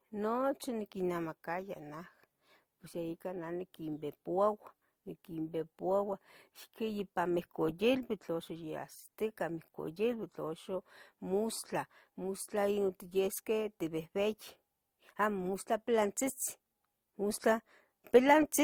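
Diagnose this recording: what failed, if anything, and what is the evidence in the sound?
Two layers of coding artefacts overlap throughout the speech, content reaching 20 kHz. Codec stage, likely transcoding between lossy codecs, fitting MP3 re-encoded as Opus.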